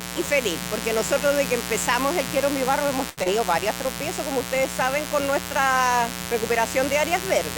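A mains buzz runs through the whole clip, sitting only a little below the sound itself. It comes from 60 Hz mains getting in through a dimmer, rectifier or unshielded lead, where sharp switching spikes twice per cycle spread energy into harmonics up to several kHz. Unlike a plain low hum, which is smooth and mostly at the fundamental, this is raspy and bright, with its edge reaching well up into the treble.

At 3.09 to 3.19 s there is a short stall from a late packet. The packet was not in the jitter buffer when it was due, so the receiver held the last sound for about 78 ms until it arrived, then carried on from the same point. Nothing is lost. One sound is simply drawn out too long, with a faint buzzy or dipped texture. That holding-without-loss, which pushes everything after it slightly later, is what separates it from the dropout that follows.

From 3.23 to 3.41 s comes a short concealed packet loss. 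About 40 ms of audio never reached the decoder, and the receiver patched roughly 23 ms of that gap by extending the preceding sound, tonal or noise-like as fit, before blending back into the real stream. The result is a brief smear or wobble. Unlike the stall, material is actually missing here, so a short sound can disappear, and the playback skips forward slightly rather than lagging.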